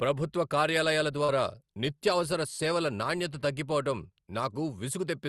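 At 1.24 to 1.30 s, after "ప్రభుత్వ కార్యాలయాల", a brief smear covers 40 ms: short concealed packet loss, with the decoder stretching the preceding sound across missing audio.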